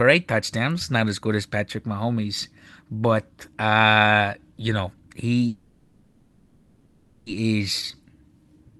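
From 5.47 to 7.29 s, after "but uh you know", a call audio freeze fills about 1.8 s with a fading continuation of the last sound, likely from delayed packets draining the jitter buffer. Speech then resumes with nothing missing. From 7.85 to 8.04 s, a jitter buffer slow-down repeats pitch periods, adding 36 ms and running the speech at 85% speed with the pitch unchanged.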